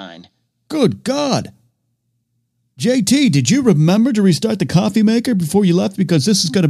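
Nothing in the recording stood out as a technical problem on listening.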